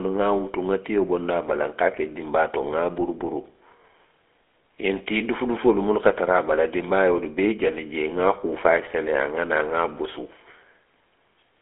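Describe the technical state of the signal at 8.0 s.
At 8.0 s the speech carries GSM full-rate codec damage, present across the whole clip rather than at that instant alone. The codec rebuilds the voice from a vocal-tract model driven by a sparse, regularly spaced pulse excitation, which fits a 13 kbps stream. The result is a plainly audible buzzy, gravelly roughness, with the band confined to roughly 300 Hz to 3.4 kHz and nothing above 3.8 kHz.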